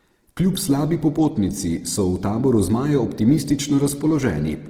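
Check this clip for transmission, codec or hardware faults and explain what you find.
One codec fault runs through the whole clip. Throughout the speech, the likely cause is Opus compression in its music (CELT) mode at a low bitrate, which fits roughly 16 kbps. Short of bits, the encoder keeps each band's energy but fills the detail with folded or noise-like content. Bandwidth stays full, up to about 20.2 kHz, yet voiced tones sound plainly rough, grainy and noisy rather than swirling.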